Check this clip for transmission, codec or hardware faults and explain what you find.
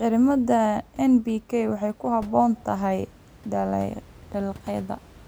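No transmission, codec or hardware faults are audible.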